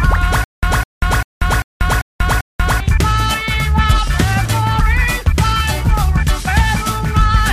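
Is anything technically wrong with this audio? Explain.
Yes: from 0.44 to 2.80 s there's a stutter with silent gaps. A 204 ms burst repeats six times, with 189 ms of dead silence between, likely a stalled stream.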